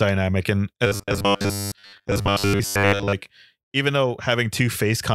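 From 0.87 to 3.14 s the speech turns into robotic sound from repeated short buffers: a rigid 100 Hz metallic buzz, likely from a 10 ms chunk replayed for roughly 70% of the audio.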